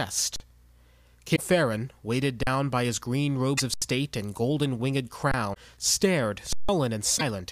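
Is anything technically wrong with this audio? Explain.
Yes, the speech has two kinds of problem, both short.

The first is an underrun with a held sample, at 0.36 s, 2.43 s (just before "by his green"), 3.74 s, 5.31 s (just after "and golden winged") and 6.53 s. The output buffer ran dry and the converter held its last value, so the waveform freezes flat and the speech simply stops. The holds last 40, 40, 80, 23 and 160 ms. Roughly that much live speech is lost in each one, so the speech resumes further along.

The second is a broken MP3 bit reservoir, at 1.35 s, 3.57 s, 5.53 s (shortly after "and golden winged") and 7.17 s. Each is a blip of about 30 to 45 ms where the speech skips ahead and comes out garbled for a moment. The likely cause is that frames of about 26 ms each went missing. The frame that follows expects to borrow bits from its predecessors, but finds unrelated data there instead, so it decodes as a short smear of junk before the audio settles again.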